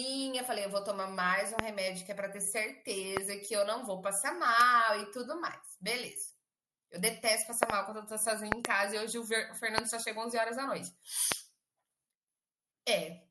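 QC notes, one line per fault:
1.59, 3.17, 7.63–7.72, 8.52–8.67, 9.78 and 11.32 s: loud pop. A sudden voltage step, likely from a connector, switch or static discharge, enters the chain and is shaped by the following circuits into sharp clicks. Each clicks about 20 to 25 dB above the speech, and the two ranges hold a double pop.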